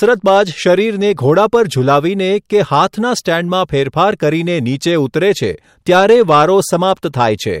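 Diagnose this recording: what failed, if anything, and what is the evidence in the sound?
The speech hits hard clipping in three stretches: 0.03 to 0.73 s, 1.29 to 1.55 s, and 5.90 to 7.26 s. The level there exceeds what a gain stage or converter can pass, by about 4 dB, 2 dB and 6 dB in turn. The peaks are cut flat. Those flat tops add harsh high harmonics. The short middle burst crackles on peaks. The last and longest stretch turns into a rough fuzz on every loud sound.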